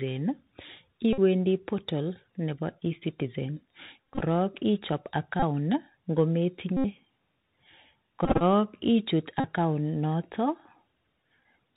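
Throughout, the link runs through the Bluetooth CVSD headset codec. Its one-bit delta modulation cuts everything above 4 kHz, leaving scratchy sibilants and a granular hiss beneath the speech.

Lost headset packets are replaced by replaying the previous packet's bits, heard as Bluetooth headset packet repeated at 1.13–1.20, 4.04–4.23, 5.40–5.43, 6.77–6.85, 8.25–8.43, 9.40–9.44 and 11.40–11.44 s. Each produces a brief buzz near 267 Hz, and the 4.04 and 8.25 s runs break into scattered stutters.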